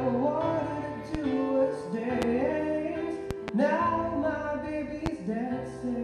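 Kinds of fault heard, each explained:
Loud pop: A sudden voltage pulse lands on top of the audio, likely from a plug, a switch, static or a driver glitch. The circuits that follow shape it into a short, sharp pop. Single pops sit at 1.15–1.18 s, 2.22–2.25 s and 5.06–5.09 s. Two pops come in quick succession between 3.31 and 3.51 s. Each peaks about 15 dB above the sound. The sound carries on underneath every pop.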